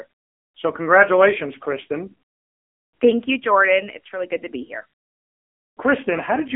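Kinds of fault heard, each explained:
AMR narrowband mobile codec: The speech sounds buzzy, thin and synthetic throughout, confined to roughly 250 Hz to 3.4 kHz, with nothing above 3.6 kHz. Damage this heavy fits a low AMR-NB mode near 6.7 kbps, where a coarse vocal-tract model driven by sparse pulses rebuilds the voice.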